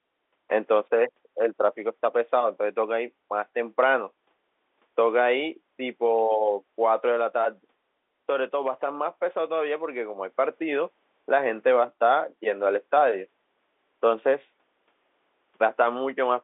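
Telephone-line speech, with no technical faults to report.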